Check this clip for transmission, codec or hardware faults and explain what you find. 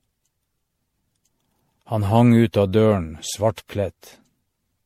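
There is one codec fault, present for the whole clip. It is generation loss. The speech sounds swirly, smeared and hollow, and consonant attacks blur. Nothing remains above 16.5 kHz. The likely cause is repeated MP3 encoding, about seven passes, each on a shifted frame grid. The damage is worse than 64 kbit/s alone would explain.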